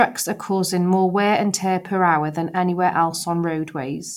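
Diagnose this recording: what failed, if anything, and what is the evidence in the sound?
Nothing in this speech recording points to a failure at any stage, so there's no fault to diagnose here.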